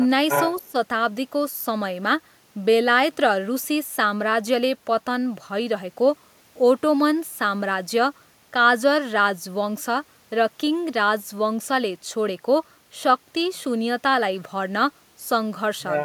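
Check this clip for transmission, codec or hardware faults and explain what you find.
Two faults sit at the very start of the speech, both most likely from an echo canceller on a loudspeaker call.

Echo leak, 0.29 to 0.61 s: a discrete copy of the voice returns 360 ms late at roughly the same level as the speech, likely residual loudspeaker pickup the canceller missed. Unlike room reverberation, it is a separate, clearly delayed repeat rather than a smooth tail.

Speech suppressed in double talk, 0.60 to 0.76 s: the voice dips by around 15 dB for about 150 ms, likely the canceller turning everything down while both sides overlapped. Unlike a packet dropout, the level sags while the voice stays present.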